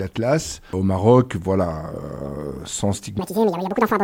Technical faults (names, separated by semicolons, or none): section at the wrong speed